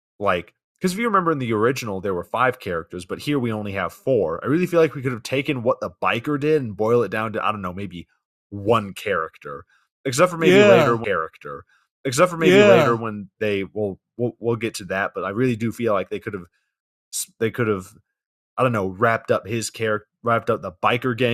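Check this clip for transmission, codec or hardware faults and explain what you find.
There's one fault here, a stream segment repeated. At 11.03 s the speech jumps back and replays a stretch that runs until 13.03 s, so about 2.0 s of material gets heard twice. What's going on is that the player fetched or queued the same chunk of the stream a second time and simply played it again. You hear a small blip right at the jump back, then that same two seconds of speech over again.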